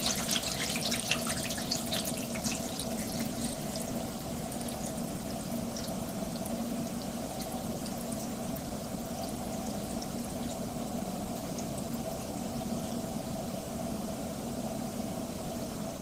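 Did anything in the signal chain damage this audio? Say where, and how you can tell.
No, nothing along the way seems to have harmed these sounds; no stage of the chain leaves any audible damage on them.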